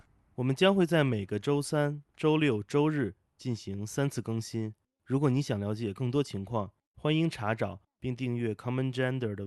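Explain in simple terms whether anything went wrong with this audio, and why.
Nothing went wrong that I could hear: the speech comes across as you'd expect from an ordinary online call, and no problems stood out on listening.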